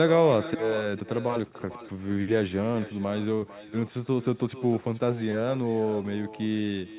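Speech over a call link, band-limited so nothing sits above 4 kHz, carries echo with no canceller throughout: each phrase returns about 13 dB quieter and thinner roughly 400 ms later, looped back from a far-end loudspeaker into its microphone. On a spectrogram every syllable has a faint delayed twin, and the waveform shows smaller trailing copies.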